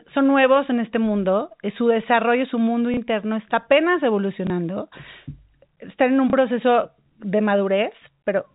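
At 2.94 s, 4.47 s and 6.3 s, packet loss with last packet repeated replaces 30 ms of speech, consistent with one 30 ms packet replayed each time. Each gap is a small blip, visible as a copied block bounded by vertical lines on the spectrogram. The 4 kHz ceiling of the G.711 telephone coding is also visible.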